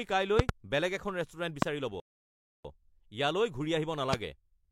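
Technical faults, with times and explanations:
0.39–0.51 s (a double pop just before "বেলেগ এখন"), 1.62–1.65 s, 4.13–4.16 s: loud pop, sharp thumps some 25 dB above the speech, likely electrical transients; thin full-height vertical spikes on waveform and spectrogram.
2.0–2.65 s: rebuffering stall, playback halts in silence for 0.65 s and resumes exactly where it stopped, a flat gap in the waveform and blank spectrogram band.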